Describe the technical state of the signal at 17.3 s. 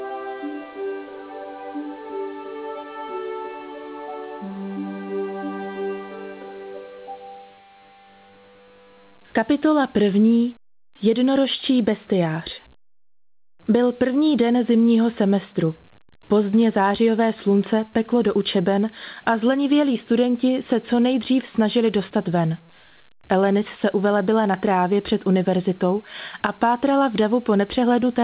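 At 17.3 s the signal is intact, with no dropout, glitch or distortion, only the narrow band of the call path, which carries nothing above 4 kHz.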